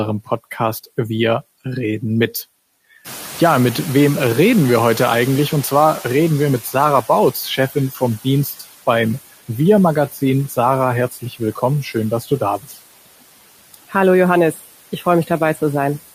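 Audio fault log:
throughout: noise suppressor artifacts. The background is pulled down by about 16 dB frame by frame, so it sinks between words and rises under them. Unlike the catch-up below, this pumping runs across the whole clip.
3.04 to 7.74 s: noise suppressor catching up. Just after "reden mit" the room noise jumps by about 16 dB at roughly 3 s. The suppressor's estimate lags, first cutting only about 11 dB, then sinking the noise over 4.7 s. Its gradual fade sets it apart from the steady artifacts.
6.6 to 8.63 s, 10.11 to 10.57 s, 11.11 to 12.79 s, 13.74 to 13.95 s, 14.52 to 15.59 s: speech cut by the noise suppressor. The suppressor mistook parts of the speech for noise and turned them down by about 11 to 16 dB, a few hundred milliseconds or less in each stretch. The affected speech sounds swallowed or faint. These dips follow the speech, not the background.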